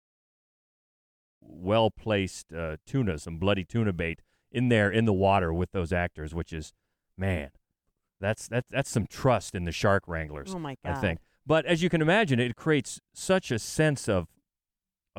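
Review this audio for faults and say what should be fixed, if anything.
Nothing needs fixing: the speech holds a steady, intact signal throughout, with only a smooth, deliberate fade-in over roughly the first second and a half.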